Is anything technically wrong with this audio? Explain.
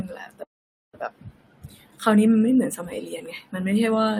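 Yes, there is a call audio freeze from 0.43 to 0.94 s. Delayed packets likely drained the jitter buffer, inserting a half-second gap that is almost entirely silent before the speech resumes with nothing lost.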